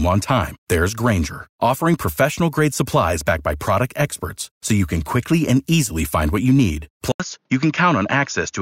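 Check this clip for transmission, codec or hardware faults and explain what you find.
One fault is present. Input switched to a poorer device at 7.12 s, after "find what you need": likely a narrower-band microphone, so after an 80 ms gap the sound turns dull, with nothing above 6.9 kHz.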